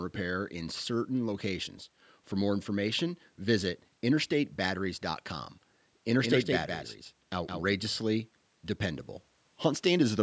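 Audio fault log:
6.22–7.74 s, doubled audio track: for about a second and a half the speech is joined by a second full-band copy of itself trailing roughly 150 ms behind and only a few dB quieter, so every syllable gets a crisp slapback. There's no decay or room tone on the copy, and it cuts in and out abruptly, so it's no echo. It's likely a second capture path or an edit leaving two copies out of step. Like the rest of the call audio, the copy has nothing above 8 kHz.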